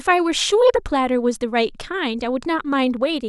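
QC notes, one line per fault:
No technical faults are audible at any point in the signal.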